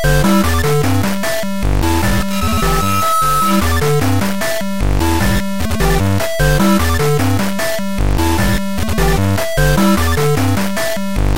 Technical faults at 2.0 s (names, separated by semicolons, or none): low bit depth without dither; loudspeaker feedback squeal